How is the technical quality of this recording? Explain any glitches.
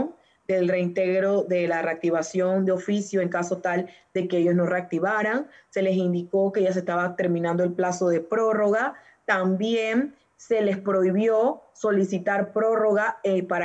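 The technical quality of this recording is sound, with no glitches to explain.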